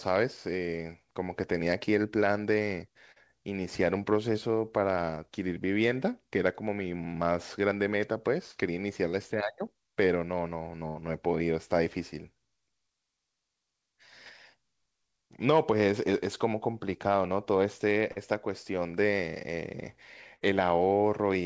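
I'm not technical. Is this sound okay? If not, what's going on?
No. At 3.12, 8.52 and 18.12 seconds the speech briefly smears or wobbles for a split second. This is short concealed packet loss: about 40 ms of the call arrived too late, and the receiver filled the gap by stretching the sound just before it.

From 10.88 to 10.99 seconds, and again from 20.36 to 20.47 seconds, the voice turns into a brief held buzz or fading hiss, then jumps ahead. That is a burst of packet loss. A stretch went missing, about 80 ms the first time and about 40 ms, half as much, the second. The receiver filled it in and faded it out, so the speech in that stretch is lost.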